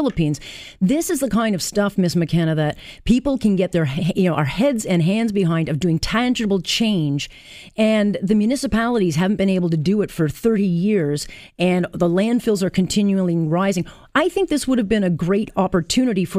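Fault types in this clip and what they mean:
No technical faults can be heard anywhere in this speech clip. Nothing in the audio calls for a fault entry here.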